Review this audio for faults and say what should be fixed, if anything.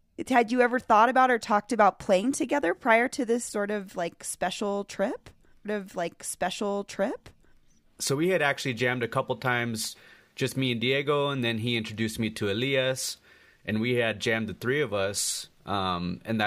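A stream segment repeated from 5.64 s to 7.64 s: right after "of like special trip", the speech jumps back and replays about 2.0 s of material, adding that much to the running time, with a small blip at the splice. This happens when the player fetches or queues the same media segment twice, so the playlist or buffer hands the decoder identical content in succession. The player should track segment sequence numbers and discard any segment already queued.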